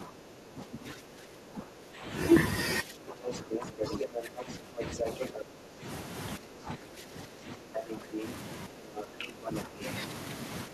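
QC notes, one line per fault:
0.00–2.07 s, 2.83–9.84 s and 10.67 s: speech suppressed in double talk. The talker's speech dips by roughly 10 dB at its deepest, covering most of the first two seconds, around five seconds of the long middle stretch, and a brief moment at the very end. This is likely the echo canceller turning everything down when both sides spoke at once.
3.27–5.43 s, 7.89–8.29 s and 8.96–9.61 s: other side's voice leaking through. A second voice comes through alongside the talker. In the first stretch it is somewhat louder than the talker, and in the two short later bursts it is about level with them. This is likely loudspeaker echo the canceller failed to remove from the microphone.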